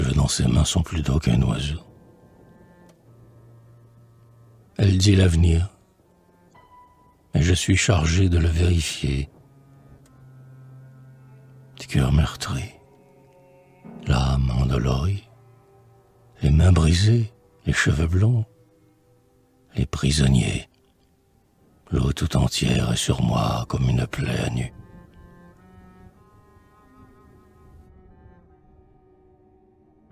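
Nothing here catches the ear as a technical fault; the audio runs along without a single moment that sounds like something went wrong.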